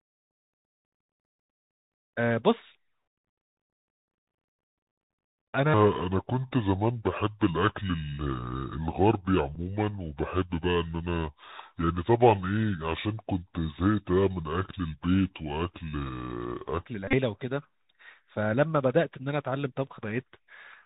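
The speech runs through a Bluetooth CVSD headset codec the whole way, and its damage is plainly audible: nothing above 4 kHz, scratchy s sounds, and a granular hiss that sets it apart from a clean narrowband low-pass, consistent with the 64 kbps one-bit stream. From 5.74 to 16.86 s a section at the wrong speed plays at 0.695 times normal, slower and about seven semitones deeper, likely from a wrong playback clock; tempo and pitch drop together, unlike a pure pitch shift. A Bluetooth headset packet repeated at 9.55 s gives only a small tick. Between 17.08 and 17.15 s, scattered repeats totalling about 49 ms, the longest run near 30 ms, produce a brief buzz near 267 Hz rather than the silence of a plain dropout.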